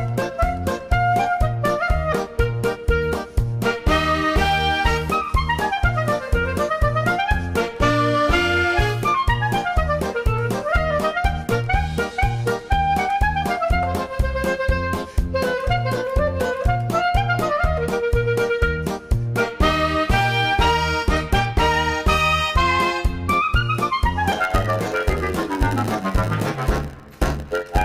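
From 24.31 s to the end, a steady buzz near 92 Hz appears and the sound drags slightly slow, to about 0.92 of normal speed. This is a block size mismatch (padded): each block arrives short and its remainder is zero-filled, inserting a brief gap at that rate.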